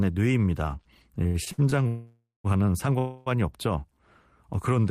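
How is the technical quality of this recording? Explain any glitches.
The speech is interrupted three times by network-style dropouts in its middle section.

Repeated stalls (stutter), 1.23 to 1.74 s: five short gaps, the longest 80 ms, filled about 182 ms. The receiver's buffer kept running dry, so it stretched the last sound each time. Nothing is lost, but the speech drags and stutters.

Call audio freeze, 1.88 to 2.46 s and 2.98 to 3.28 s: the sound hangs as a fading continuation, about 568 ms then 279 ms, the first ending in 150 ms of silence. Likely packets held up in transit emptied the buffer. Speech resumes where it stopped, shifted later.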